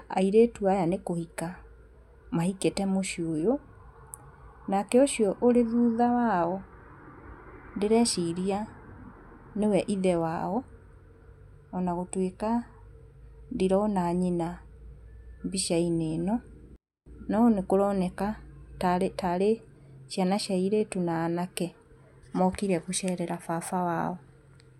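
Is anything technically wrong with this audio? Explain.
Yes. From 16.76 to 17.06 s the speech suddenly drops to near silence, a 24-bit alignment error that leaves it too quiet. Samples held as 24-bit integers in the low bytes of a 32-bit word are being read as full 32-bit integers. The top byte is empty, so every value comes out 256 times smaller. For those 0.3 s the level falls by about 48 dB. The sound stays clean and undistorted but is barely audible until the level snaps back.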